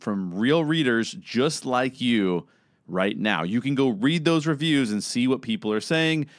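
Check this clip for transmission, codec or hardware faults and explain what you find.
Nothing stood out on listening to this speech recording.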